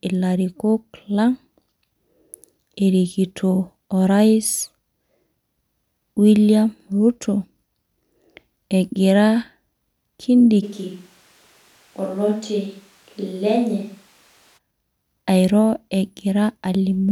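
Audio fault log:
10.64–14.56 s, switch to a distant microphone: the speech abruptly turns roomy and hollow, thinner in the bass and roughly 5 dB quieter, with room noise rising to about 30 dB below it, likely because the close microphone dropped out and a farther pickup took over until it returned.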